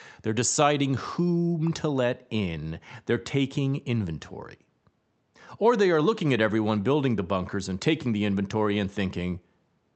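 Speech that has come through a WebRTC call path with Opus, and nothing technically wrong can be heard in it.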